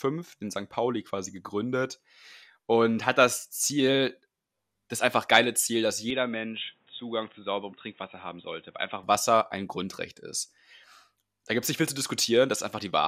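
Input switched to a poorer device, from 6.10 s to 9.03 s: the speech abruptly turns dull and boxy, with nothing above 3.8 kHz, drops about 5 dB in level, and picks up a faint new background noise, roughly 40 dB below the speech. There is no gap at either switch. The recording has likely moved mid-take to a narrower-band input, such as another microphone or a headset's call profile, and then returned to the original source at 9.03 s.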